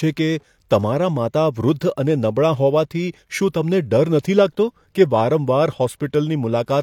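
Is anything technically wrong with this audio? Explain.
Yes, there's pre-echo in two spots in this speech. At 1.80 s and again at 4.23 s, just before "લાગતો કે", you get a brief hiss that runs ahead of a sharp attack, about 12 ms the first time and 17 ms the second. The transform codec spreads its quantisation noise across a whole block, so noise sized for the loud onset leaks into the quiet moment before it. The attacks end up sounding a bit soft and smeared.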